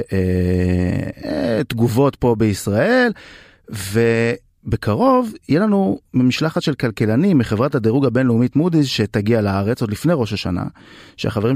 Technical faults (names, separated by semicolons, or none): none